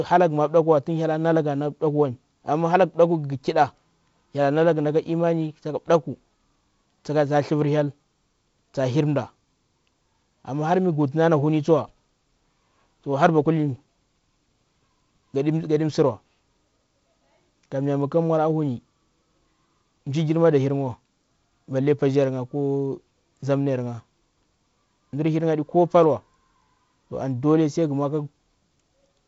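Speech carried over G.722 wideband telephone coding at 48 kbit/s, with content reaching to about 7.7 kHz and the light coding texture expected of that rate, shows no technical fault.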